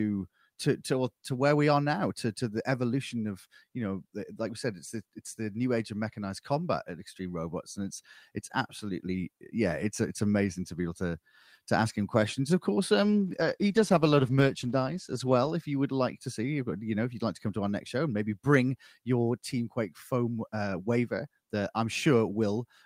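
Right after "him questions of course", at 13.05 s, there's a call bitrate drop lasting until about 15.57 s, with "you would like to" picking up just after. The call's bandwidth estimate fell and the encoder got squeezed, which sounds like a fall from roughly 64 kbps to somewhere near 16 kbps, held for about 2.45 s. At that rate the speech gets coarse and watery, and the top end is cut away so it turns muffled until the bitrate recovers.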